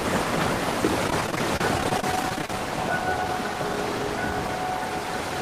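Repeated packet loss (robotic sound) from 1.07 to 2.50 s: over twenty brief holes, up to 32 ms, patched by stretching prior sound, giving choppy, robotic audio.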